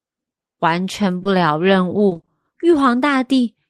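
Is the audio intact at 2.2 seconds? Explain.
No. Repeated packet loss (robotic sound) runs from 2.09 to 2.29 s. Five short dropouts, each 20 ms at most, are patched by stretching the preceding sound. Half of that span is filled this way, so the speech sounds choppy, with pieces missing.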